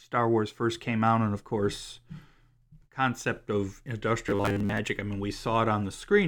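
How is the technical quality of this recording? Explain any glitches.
One glitch stands out in the speech, a short stretch of robotic sound from repeated short buffers. From 4.27 to 4.79 s, between "concept of" and "I mean", the sound turns into a rigid, metallic buzz at 100 Hz that only loosely tracks the speech. The likely cause is audio arriving too seldom, so playback keeps looping the last fragment for most of that stretch. A 100 Hz buzz points to a repeated chunk of about 10 ms.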